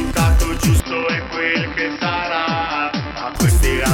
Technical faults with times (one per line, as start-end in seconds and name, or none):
0.80-3.36 input switched to a poorer device